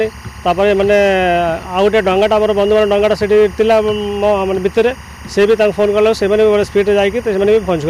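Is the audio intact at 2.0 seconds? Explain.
No. Timecode bleed from a neighbouring line leaks in throughout the clip, adding a steady chirping warble near 1 and 2 kHz, roughly 25 dB below the sound.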